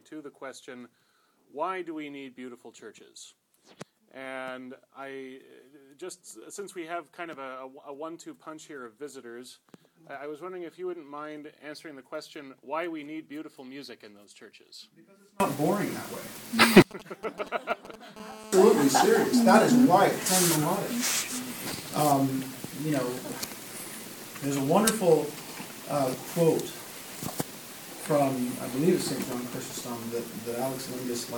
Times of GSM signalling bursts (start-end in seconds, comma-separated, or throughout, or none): 16.91-17.96